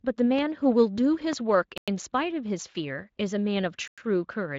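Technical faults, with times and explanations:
0.39–0.41 s and 1.33–1.35 s, loud pop: Two sharp pops sit on top of the speech, each peaking at about 10 dB above it. The speech carries on underneath. A sudden voltage pulse, likely from a plug, switch or static discharge, entered the signal path. Later circuits shaped it into a brief thump.
1.78–1.88 s and 3.88–3.98 s, gap between chunks: The speech stops dead for 100 ms twice. The holes fall 2.1 s apart, which fits audio delivered in 2-second chunks. Silence was left at each join. No speech is lost.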